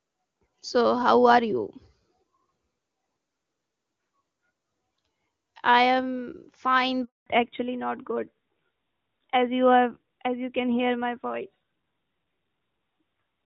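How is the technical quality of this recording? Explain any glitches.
The call carries two linked faults a little past the 7-second mark, both tied to a change of network partway through.

Handover gap, 7.04 to 7.26 s: right after "I am fine" the audio dies out within a few tens of milliseconds and stays silent for 220 ms. While the phone was switching the call between networks, no speech frames reached the decoder, so nothing could be reconstructed for that stretch. Whatever was said in that window is lost, not muffled.

Fallback to narrowband, 7.26 s to the end: once the new link comes up, the audio loses everything above 4 kHz, and the sound turns duller and rougher. The call has dropped from the AMR wideband (HD Voice) codec to the older narrowband AMR codec. The audio stays band-limited for the rest of the clip. Before the handover, the wideband section shows little or no codec damage, which fits the top 23.85 kbit/s mode.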